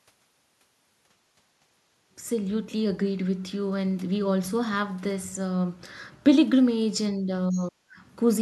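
This speech clip shows speech suppressed in double talk: with both sides talking at once, the echo canceller likely could not tell the local talker from loudspeaker echo and turned everything down. The voice dips slightly from 7.18 to 7.29 s, then drops sharply, by about 35 dB, from 7.51 to 7.98 s. Inside that gap, the other side's voice is leaking through from 7.55 to 7.62 s, likely residual loudspeaker echo the canceller missed, heard as a brief scrap about 20 dB below the talker.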